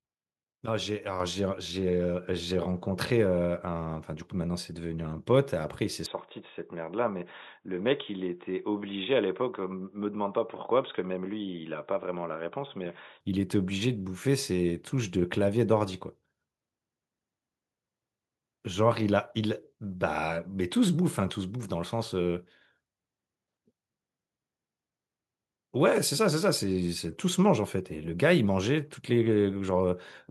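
At 1.2 s the call software stepped the microphone volume up in a single jump, raising the device's input gain by about 5 dB. The speech and the background noise both become louder together at that instant, and they stay at the new level.

From 6.06 s to 13.21 s the input likely switched to a poorer device, such as a headset's call profile. It passes a narrower band, so the speech turns dull and boxy. It also drops a little in level and sits over a faint new noise floor. There is no gap at the change.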